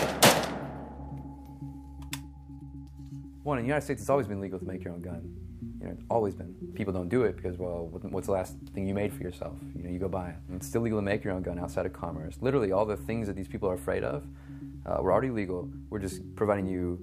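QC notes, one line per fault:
Nothing to flag here; I listened all the way through and didn't hear a single fault worth a line.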